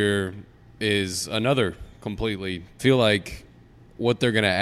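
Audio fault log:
2.79 s stream segment skipped: right after "is another completely" the speech jumps forward with a brief blip, likely a stream segment that failed to load and was passed over.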